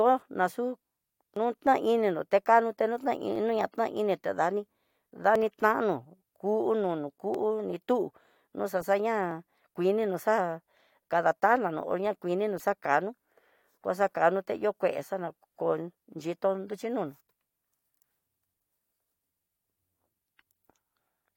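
Tiny skips in the speech land at 1.36, 3.36, 5.36, 7.34 and 9.31 s, spaced almost exactly 2 s apart. This regular rhythm points to overlap between stream segments: the speech arrives in 2-second segments whose timestamps overlap slightly, and the player trims the overlap as if it were duplicated audio. A few milliseconds of real speech are discarded at each boundary, so the waveform jumps.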